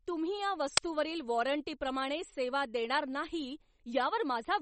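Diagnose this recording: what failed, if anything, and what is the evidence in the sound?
Uninitialised buffer at 0.77 s, in the driver or buffer stage: a single loud crack, about 5 ms long, cuts into the speech. A block was sent to playback before any audio had been written to it, so stale memory was played as samples.

MP3 compression throughout, at the codec stage: the speech sounds watery and swirly, and nothing is present above 8.4 kHz. The likely cause is an encoder running short of bits, which fits a low bitrate. It cut the treble at a fixed frequency and dropped weak frequency components frame by frame.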